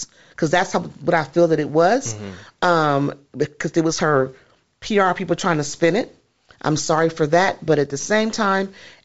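Nothing here counts as a fault; the speech comes over G.722 wideband telephone coding, which fits the full 64 kbit/s mode, so everything simply tops out around 7.7 kHz the way that path is meant to.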